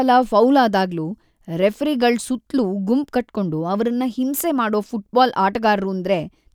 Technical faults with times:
none

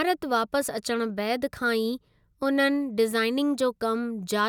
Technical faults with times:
none

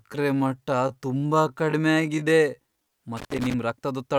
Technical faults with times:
0.00-2.92 time-stretched section
3.17-3.54 loose connector crackle

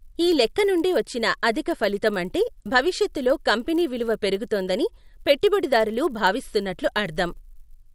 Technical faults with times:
0.00-7.95 resampler restarted on every block

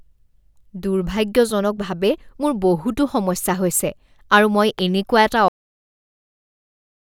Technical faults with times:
4.79-4.81 loud pop
5.48-7.10 cut-off end

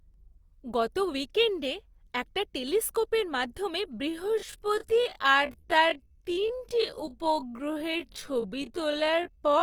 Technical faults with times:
4.08-9.62 time-stretched section

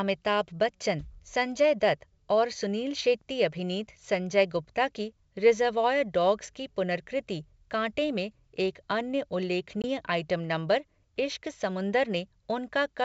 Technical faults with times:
9.82-9.85 packet loss on an ADPCM call

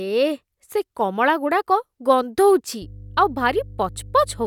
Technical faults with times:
2.82-4.47 mains hum

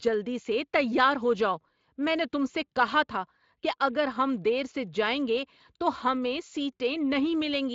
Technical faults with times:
none

